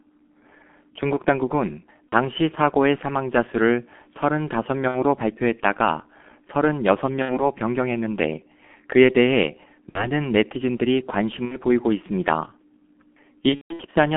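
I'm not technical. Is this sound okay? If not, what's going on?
No. The G.723.1 codec, an old internet-phone format, runs throughout. It squeezes the speech hard and drops the high end, so it sounds muffled and hoarse with blurry consonants.

VoIP packet loss concealed by the speech codec hits at 2.10–2.14, 4.88–5.04, 7.22–7.47, 9.89–10.09, 11.45–11.57 and 13.49–13.83 s. Chunks of audio went missing, and the decoder filled each gap by stretching the last sound into a fading buzz. The last gap is the longest and most broken up.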